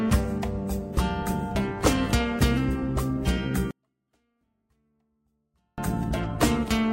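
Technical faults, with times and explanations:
3.71 to 5.78 s, 24-bit alignment error (too quiet): samples packed into the low 24 bits of each 32-bit word were read as full 32-bit integers, so every value shrinks by a factor of 256. The audio stays clean but drops about 48 dB and is barely audible for those two seconds.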